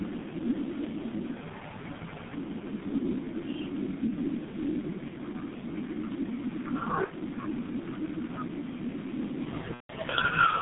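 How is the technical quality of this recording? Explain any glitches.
The recording is poor: the speech is narrowband, muffled and rough throughout, with two brief glitches near the end.

G.723.1 codec: for the whole clip the speech sounds dull and hoarse, with smeared consonants. The line passes only about 200 Hz to 3.6 kHz, and the heavy coding damage fits a G.723.1 stream at around 6.3 kbit/s. That codec models the voice in 30 ms frames and updates slowly, so fast consonant detail is blurred and the tone turns rasping.

VoIP packet loss concealed by the speech codec: from 7.04 to 7.13 s and again from 9.74 to 9.92 s, the speech briefly turns into a stretched sound that fades, and in the longer gap it cuts to silence after the first two lost frames. The decoder is filling missing audio, about 60 ms (which fits two lost frames) and then about 150 ms (five frames), by repeating its last pitch and filter at falling gain. 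Because each frame builds on the one before, the speech stays weakened for a short time after each gap.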